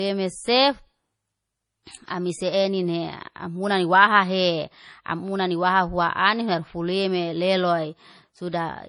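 From start to finish the speech carries the marks of low-bitrate audio saved at a high bitrate. It sounds thin and swirly, with smeared sibilants and a watery shimmer, which fits an MP3 encode at around 32 kbit/s that was likely re-encoded at something like 256 kbit/s. The second pass cannot restore what the first discarded. On a spectrogram the upper band sits empty above a hard ceiling, with patchy, blocky holes in the high frequencies.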